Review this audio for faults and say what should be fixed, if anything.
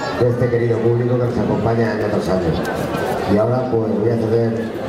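Chunks out of order at 2.01 to 2.03 s. One 10 ms chunk of the sound arrives one chunk late and plays after the chunk that should follow it. Nothing is missing, but the two pieces swap places. The reversed order creates three hard joins in about 20 ms. The moment sounds briefly jumbled. Prevention: reorder incoming chunks by sequence number in a jitter buffer before writing them to the output.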